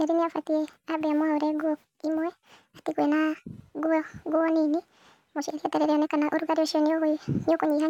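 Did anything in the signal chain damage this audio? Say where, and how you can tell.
Yes. At playback, a wrong sample rate runs the whole speech clip 1.5 times fast and about 7 semitones high, consistent with 32 kHz material played at 48 kHz. Unlike a pitch shift or time-stretch, tempo, pitch and formants all move together by one ratio.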